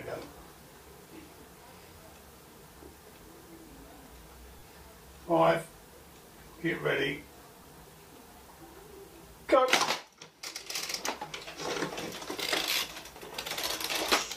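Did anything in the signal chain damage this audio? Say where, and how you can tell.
Yes, at the Bluetooth link: lost LE Audio frames. There's a 37.5 ms dropout at 4.59–4.63 s, which fits about five 7.5 ms frames, and a single one at 7.63 s. Each gap sounds like a brief noisy smear. The LC3 decoder covers the missing frames by replaying the last spectrum with random signs.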